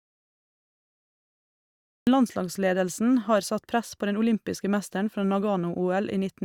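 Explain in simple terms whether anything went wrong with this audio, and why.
Yes, something went wrong: an audio dropout to silence. The clip opens in total dead silence until 2.07 s, when speech starts mid-flow with "landslagsledelsen har satt press", likely from a lost input signal.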